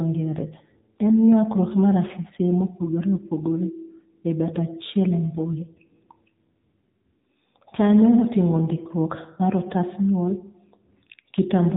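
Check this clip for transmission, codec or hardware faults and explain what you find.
One fault runs through the whole speech clip: AMR narrowband mobile codec coding. Nothing above 3.8 kHz survives, and the voice is plainly buzzy and synthetic, which fits a low AMR-NB mode near 7.4 kbps. The vocal-tract model rebuilds each 20 ms frame from sparse pulses. Unlike clean narrowband telephone audio, the damage goes beyond lost treble to this coarse, artificial texture.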